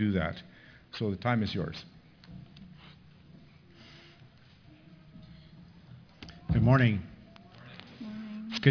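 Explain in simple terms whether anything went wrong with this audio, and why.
Something did go wrong, and it lasts the whole clip: aliasing. The sound seems to have been converted to a much lower sample rate, which fits a drop to about 11 kHz, without first removing the high frequencies that rate can't hold. Everything above 5.5 kHz folds back down as false, unrelated tones, so bright sounds come out gritty and metallic. A plain loss of treble would just sound dull. This sounds harsh and wrong instead.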